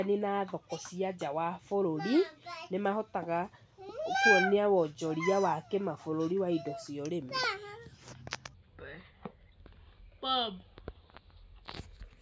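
Wrong sample rate from 8.54 s to the end at 12.21 s: the speech slows to two-thirds speed and drops about 7 semitones, sounding low and dragging. Speed and pitch falling together fits 24 kHz audio played back at 16 kHz without conversion.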